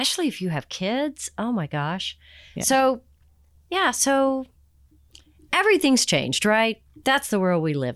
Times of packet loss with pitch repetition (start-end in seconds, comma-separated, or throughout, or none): none